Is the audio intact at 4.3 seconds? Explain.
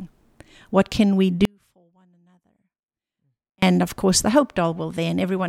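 Yes, at 4.3 seconds the speech plays through intact, with no dropout, click, distortion or other fault at that moment.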